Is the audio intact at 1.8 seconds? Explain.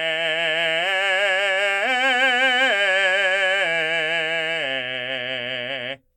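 Yes, the music plays through 1.8 seconds without any dropout, click, distortion or other fault.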